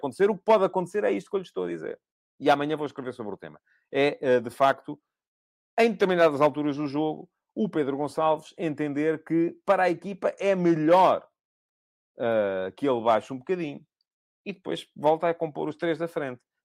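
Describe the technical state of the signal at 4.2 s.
At 4.2 s the speech signal is intact, with no audible technical fault at that moment.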